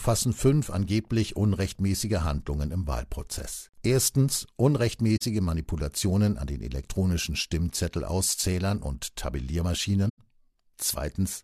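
Damaged AAC frames were caught by the decoder and concealed, causing a corrupt frame concealed fault at 5.17–5.22 s and again at 10.09–10.19 s. The speech is affected for about two and four frames.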